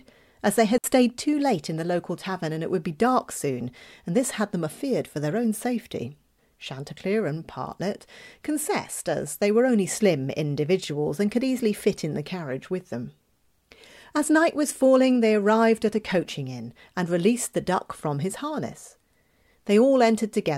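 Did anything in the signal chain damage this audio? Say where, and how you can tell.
Yes. A digital wireless dropout in the transmission link, at 0.78 to 0.84 s: the receiver lost too much of the data stream and muted itself for 60 ms. The speech breaks into a clean gap of near silence, with no crackle or noise burst on either side.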